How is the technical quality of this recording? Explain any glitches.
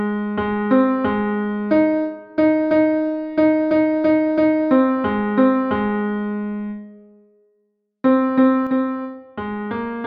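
The recording has one clear glitch near the end. At 8.67 s there is a sudden gain jump: the level drops by about 5 dB in a single step and stays lower until the clip ends. The likely cause is a digital gain change applied with no ramp, so the scaling switches from one sample to the next. The background noise drops by the same amount as the foreground sound, which distinguishes it from a fade, a compressor reacting or a source moving away.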